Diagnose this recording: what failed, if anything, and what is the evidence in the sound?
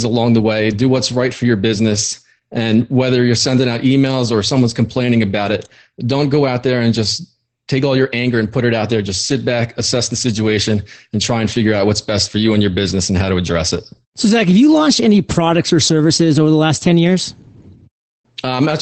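The fault is at the codec stage: Opus voice compression, applied throughout the speech. The audio has nothing above about 8.6 kHz, and the speech sounds plainly muffled, hoarse and a little robotic from start to finish. That fits Opus in its SILK linear-prediction mode with a wideband limit at a low bitrate, around 12 kbps. The band is cut near 8 kHz and the excitation is coded coarsely, which strips the upper band and roughens the voice.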